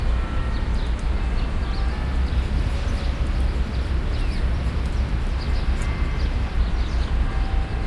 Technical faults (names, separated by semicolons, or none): wrong sample rate